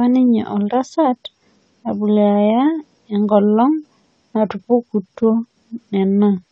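From start to finish the speech sounds dull and smeared, with nothing above about 9 kHz and a fizzy, warbling edge on sibilants. That's plainly audible AAC compression damage, likely from AAC-LC squeezed to a low bitrate, something around 32 kbps.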